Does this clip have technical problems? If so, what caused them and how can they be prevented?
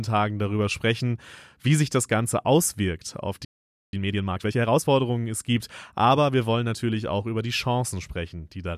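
Yes. A playback stall silences the speech from 3.45 to 3.93 s, right after "auswirkt auf". The sound then resumes. The likely cause is a buffer underrun or a blocked playback thread. Larger buffers and higher thread priority prevent it.

Time-compressed catch-up follows from 3.93 to 4.89 s, ending before "es gibt aber wir". The speech runs about 1.5 times faster. Unlike a sped-up tape, the pitch stays normal. Avoiding the preceding stall removes the need for this catch-up.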